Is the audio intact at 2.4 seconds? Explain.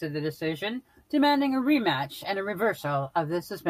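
No. After "the decision", a call bitrate drop from 1.33 to 2.45 s makes the speech rough and muffled, consistent with the encoder starving from 64 to 28 kbps. Unlike packet loss, it leaves no gaps.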